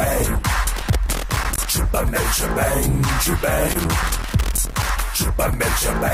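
Around 0.77 s to 1.65 s there's loose connector crackle, a worn or dirty contact flickering between connected and open, so the sound gets chopped into irregular scratchy bursts. It comes back from 3.67 s to 4.90 s, a bit longer this time.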